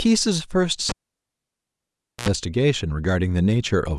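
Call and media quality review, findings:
Cable pulled and plugged in, 0.89 to 2.29 s, speech path. Pop at 0.89 s as the live connector breaks contact, then near silence for about 1.34 s. A 76 ms burst of 60 Hz mains buzz while only the plug tip touches, ungrounded. Second pop as contact seats. Probable component: loose or disturbed input cable or jack.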